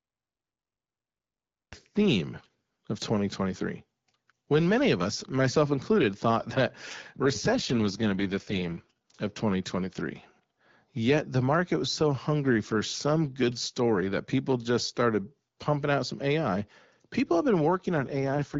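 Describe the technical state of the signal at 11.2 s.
At 11.2 s the speech passes intact through the AMR wideband (HD Voice) codec at 12.65 kbit/s, with no fault at that moment.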